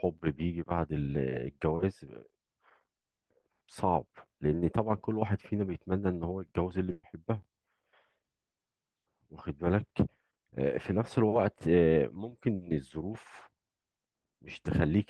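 Speech carried over a call path, with the top end stopping around 12 kHz, which fits Opus at a moderate bitrate. It has two bursts of packet loss. At 6.91 to 7.06 s, 120 ms is covered by a stretched, fading continuation of the last sound plus 20 ms of silence. At 12.55 to 12.64 s, 60 ms is filled the same way. Both times the audio resumes further on with the in-between part missing.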